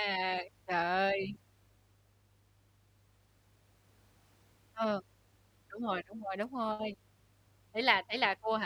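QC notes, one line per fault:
Throughout: mains hum. A steady low 50 Hz tone with some low harmonics sits well under the speech, from power-line coupling via a ground loop or nearby transformer.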